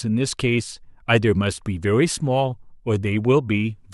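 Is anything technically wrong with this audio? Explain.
No, nothing is technically wrong with this audio.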